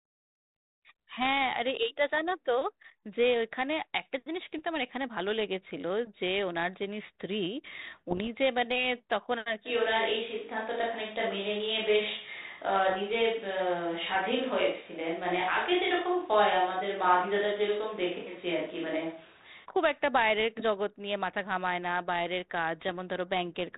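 Bit errors on an ADPCM link strike at 4.58 to 4.62 s and again, longer, at 8.10 to 8.31 s. Flipped bits knock the decoder's step size and predictor off track, so each error rings on briefly as pops and rough, gritty bursts with momentary level jumps, over a band-limited telephone sound that fits a 32 kbit/s cordless link.

From 9.68 to 19.64 s the close pickup drops out, likely a switch to a distant microphone. The sound turns abruptly roomy, hollow and thinner in the bass, at much the same level but with background noise about 30 dB under the speech, then snaps back. Within it, more ADPCM bit errors crackle at 12.90 to 12.99 s, and a final burst follows at 22.81 to 22.91 s.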